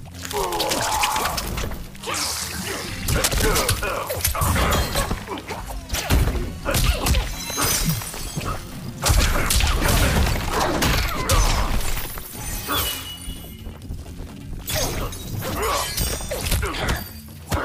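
A worn cable, connector or control was likely disturbed from 3.24 to 3.60 s, its contact resistance flickering as it moved. That produces cable scratch noise: a dense, uneven burst of scratching and rustling laid over the audio, roughly as loud as the sound itself.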